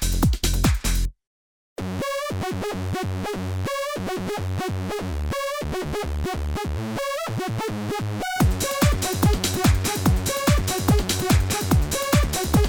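Nothing technical stands out here; the audio just runs along with no faults to point to at any moment.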